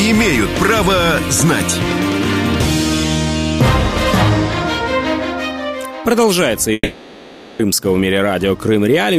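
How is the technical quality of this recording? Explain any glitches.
One glitch stands out, from 6.73 to 7.61 s. There the sound turns into a fading buzz and then near-silence, about 0.86 s long, before resuming further on with that stretch gone. This is likely a long network dropout, with the receiver smearing the last sound until it runs out.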